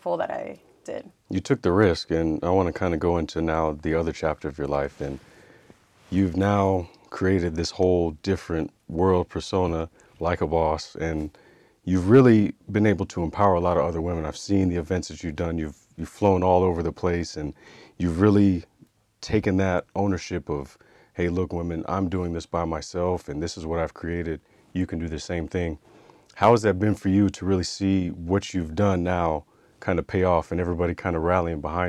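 Hard clipping occurs five times in this speech, each time a peak exceeds what a stage can pass and is cut flat. Brief crackles come at 1.81–1.84 s, 13.41–13.44 s and 16.25–16.28 s (about 1 dB over), a longer harsh burst at 12.14–12.31 s (about 3 dB), and the roughest at 26.43–26.54 s (about 5 dB). Unlike soft saturation's gradual warmth, the flat tops add abrupt high harmonics only on those peaks.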